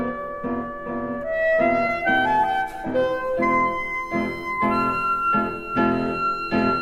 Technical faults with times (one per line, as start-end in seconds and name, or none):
1.87-1.92 short stall from a late packet